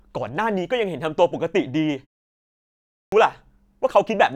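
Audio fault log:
2.68–3.12 s, clipped start after a pause: after a 0.7 s silence, the next stretch of speech enters abruptly, its opening sounds missing and roughly 0.44 s swallowed before the output catches up. The playback device appears to have gone idle during the pause and needed that long to wake and lock again. A muted pause, by contrast, would only drop the background during silence and bring the sound back intact. Here the actual speech onset is lost.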